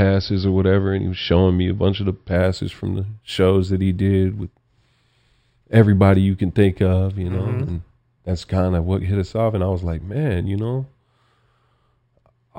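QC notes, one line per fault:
2.36–12.59 s, imaging from linear upsampling: from "a bunch of the" on, sibilants carry a faint metallic shimmer over a dulled top end. The sound fits straight-line interpolation from 12 kHz up to 48 kHz, leaving a mirrored spectrum copy at 6–12 kHz, roughly 35 dB down.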